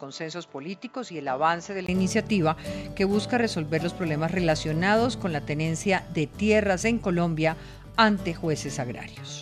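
For the first 1.88 s the audio sounds dull and a little quieter, then opens up after a 20 ms silence at 1.88 s. The likely cause is the input switched to a poorer device: the opening section comes through a narrower-band path with nothing above 7.6 kHz, a level drop of around 5 dB, and its own faint noise floor far below the signal. On a spectrogram the top band is empty before 1.88 s, and the waveform shows a short gap there.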